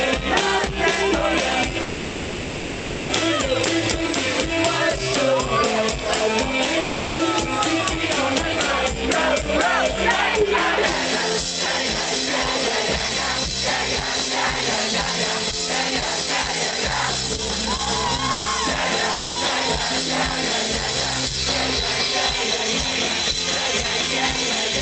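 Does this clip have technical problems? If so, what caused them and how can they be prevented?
Yes. Call audio freeze at 1.81 to 3.11 s and 18.32 to 18.48 s: the sound stalls into a fading buzz for about 1.3 s and then 0.14 s, likely because delayed packets emptied the jitter buffer. Playback then resumes where it stopped, so nothing is lost but the delay grows by those amounts. A larger or adaptive jitter buffer on a steadier connection prevents this.

Long network dropout at 6.79 to 7.21 s and 19.12 to 19.38 s: the last sound is stretched into a decaying hiss for 0.4 s and then 0.24 s. The audio likely never arrived at all, so when it returns those stretches are missing outright. Forward error correction or redundancy, together with a more reliable network link, prevents this.

Jitter buffer speed-up from 15.51 to 18.31 s: the audio runs at about 117% speed with the pitch unchanged, sounding hurried. 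After a burst of late packets the receiver trimmed many short pitch-period slices, about half a second in total, to bring the delay back down. Smoother packet delivery avoids the backlog that triggers this.

The Opus call path, consistent with about 32 kbps, limits the audio to 8 kHz and adds its usual coding noise.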